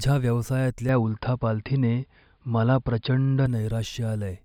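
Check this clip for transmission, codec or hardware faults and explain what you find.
One fault is present. From 0.89 to 3.46 s the speech turns dull and band-limited at about 5 kHz, with a small level shift and faint new noise, no gap: likely an input switched to a poorer device.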